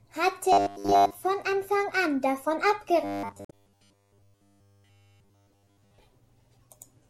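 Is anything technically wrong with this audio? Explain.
Yes, there are two kinds of fault in this speech clip.

From 0.53 to 1.20 s and again from 3.04 to 5.98 s there is robotic sound from repeated short buffers, a rigid 100 Hz metallic buzz. The likely cause is audio arriving too slowly, so the player loops a 10 ms chunk. Much of the first span and all of the second are affected.

From 3.45 to 3.53 s, inside the second buzzy stretch, damaged data in a compressed stream produces a brief glitch. Corrupted bytes make the decoder misread frames and lose sync until it finds the next valid frame header, so the audio garbles.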